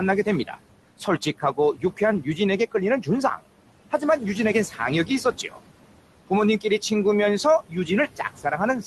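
Noise suppressor artifacts run through the whole clip. The suppressor pulls the steady background down by about 18 dB in the gaps and lets it rise again under the speech. The room noise, sitting about 15 dB below the speech, pumps.

Speech cut by the noise suppressor occurs at 0.25 to 0.58 s, 1.0 to 2.38 s, 2.72 to 3.45 s, 4.7 to 5.57 s and 7.44 to 8.86 s, with drops of about 11 to 18 dB. The suppressor mistakes quiet parts of the speech for noise and turns them down with the background, so soft consonants and word endings sound swallowed. In the first four stretches only short pieces are hit, from about a tenth to a third of a second in total. The final stretch is cut hardest.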